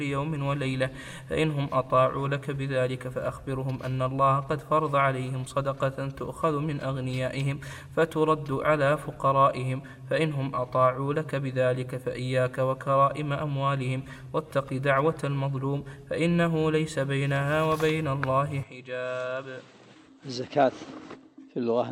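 At 18.63 s the sound abruptly turns duller and quieter, with no gap, and stays that way to the end. An input switched to a poorer device is the likely cause. The spectrogram shows nothing above 8.2 kHz, and the waveform drops by roughly 10 dB over a faint new noise floor.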